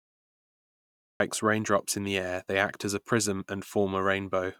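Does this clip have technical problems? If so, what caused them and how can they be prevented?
Yes: a cut-off start. The first 1.20 s is digital silence, and at 1.20 s the speech begins abruptly mid-sound with no natural attack, because capture or streaming started after the talker had already begun. Unlike a noise gate opening late, which would clip only the onset of a quiet phrase, the clip here opens in silence and the sound arrives already in progress. To prevent it, start recording or open the stream with pre-roll before anyone speaks.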